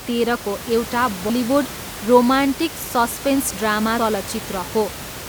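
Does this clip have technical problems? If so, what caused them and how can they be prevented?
Yes. At 1.30 s the speech lurches forward, as if a sliver had been cut out. This is compressed frames skipped: a run of roughly four encoded frames was never played, either because they were missing from the file or because the decoder rejected them as damaged. About 150 ms of audio vanishes, a jump that fits a 32 ms frame length. The room noise, about 13 dB below the speech, continues underneath. To prevent it, store and transmit the file over an error-checked path and verify its integrity before playback, so no frames are lost or corrupted.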